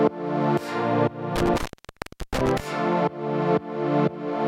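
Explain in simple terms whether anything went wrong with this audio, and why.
Between about 1.36 and 2.6 s there's an intermittent contact: a loose cable or plug briefly lost connection, and the sound cut out for roughly 0.7 s. Unlike a digital dropout, the gap has crackle at its edges and faint hiss in place of silence.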